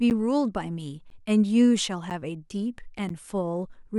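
From 0.10 s to 3.10 s the speech has periodic USB or driver dropouts, about four of them, spaced at a steady 1.0 s. Each time, around 10 ms of audio is blanked to silence as the driver stalls, producing a regular tick within the voiced sound.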